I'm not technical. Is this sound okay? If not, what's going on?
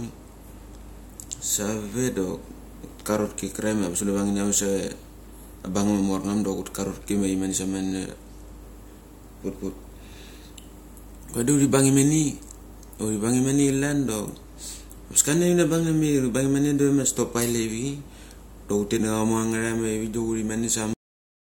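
No: there's a cut-off end at 20.93 seconds. The recording stops in the middle of a sound instead of fading out, because the final stretch of audio was never saved, so the speech jumps straight into dead silence for the last half-second.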